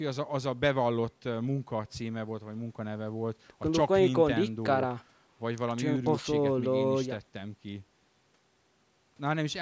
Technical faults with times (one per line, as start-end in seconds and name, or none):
none